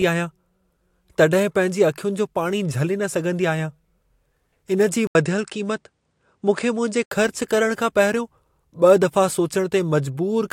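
At 5.07 s the speech drops out for 80 ms, then returns duller, with nothing above 9.6 kHz and a faint new noise floor about 55 dB below the signal, while loudness stays roughly the same. This most likely reflects an input switched to a poorer device, a narrower-band microphone or headset path, until 7.11 s, when full brightness returns. A spectrogram shows a flat ceiling at 9.6 kHz across that span; the waveform shows a brief gap at the switch.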